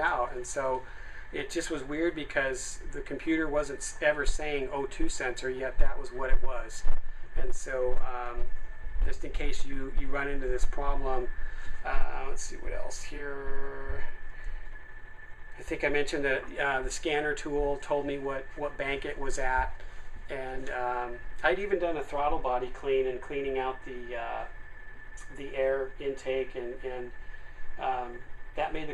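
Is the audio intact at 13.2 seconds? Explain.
No. At 13.15 to 13.20 s the stream suffers AAC frame loss with concealment. A gap of about 43 ms, which fits a single lost AAC frame, leaves the decoder with nothing to decode, so it rebuilds that stretch from the last good spectrum instead of the true content. Because the loss is so short, it doesn't fade toward silence. It is heard as a brief smeared, noisy or phasey patch.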